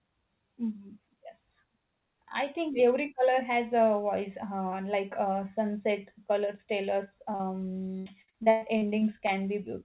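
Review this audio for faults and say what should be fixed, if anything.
Short concealed packet loss at 7.32–7.35 s and 7.35–7.41 s: two back-to-back holes of about 20 ms and 40 ms. The receiver filled each by stretching the preceding sound, heard as one brief smear. Unlike the later fault, it is a single isolated blip, not sustained choppiness.

Repeated packet loss (robotic sound) from 7.99 to 9.30 s: nine gaps, the longest 114 ms, leaving about 30% of that stretch synthesised. Each patch extends the last sound, so the sound turns choppy with pieces missing. It persists for over a second with holes recurring, which the isolated smear at 7.3 s does not.

The G.711 path, with nothing above 4 kHz, is not the cause. Preventing both means fixing the network losses behind them, with forward error correction or redundancy and a deeper adaptive jitter buffer to absorb late packets.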